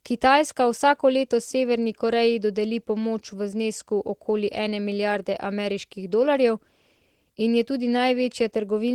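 From start to end, the speech carries Opus voice compression. The damage is plainly audible. The band stays full, so the top is not cut off. Below 8 kHz, a linear-prediction coder models the voice and codes its excitation coarsely. This gives a hoarse, slightly robotic edge. A separate transform layer fills the range above 8 kHz in hybrid fashion. The level of damage points to a bitrate near 16 kbps with 20 ms frames.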